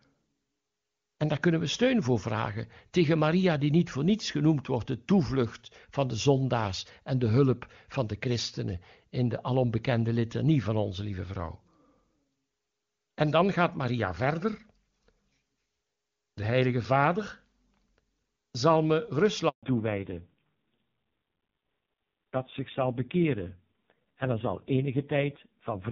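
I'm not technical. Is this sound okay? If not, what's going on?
No. Just after "zal me", at 19.49 seconds, the voice cuts out for about 0.14 seconds and then returns. That is a handover gap: the phone switched the call to a different network, and nothing got through during the switch, so that bit of speech is lost.

From 19.63 seconds to the end, the voice sounds duller and more muffled, with a rougher edge. This is a fallback to narrowband. The call dropped from HD Voice to an older, lower-quality phone format that carries nothing above 4 kHz, so the crisp high tones disappear.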